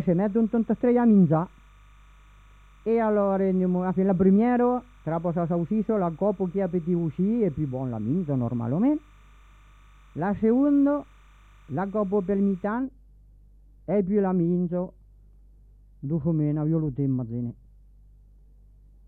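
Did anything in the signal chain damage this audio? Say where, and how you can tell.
Yes, timecode bleed in the analogue wiring. From the start to 12.68 s there's a faint chirping warble sitting way under the sound, somewhere around 40 dB down, flipping between roughly 1 kHz and 2 kHz. That's linear timecode at 29.97 frames per second leaking in from a neighbouring track or cable. The code is a square wave whose pitch depends on each bit's value, so you hear the two tones alternating.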